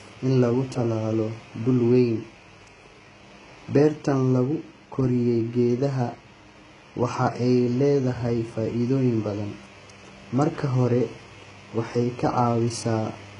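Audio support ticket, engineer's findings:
HE-AAC compression, throughout the speech. Heavy damage. Treble sounds rebuilt, not original: sibilants gritty, metallic, lispy. Nothing above 11 kHz. Likely cause: spectral band replication copying lower bands upward under a coarse envelope, so upper harmonics misalign with the coded band. Damage level fits a very low bitrate, around 12 kbps.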